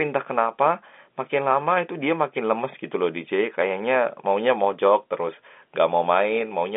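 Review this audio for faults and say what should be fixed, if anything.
No faults; nothing needs fixing.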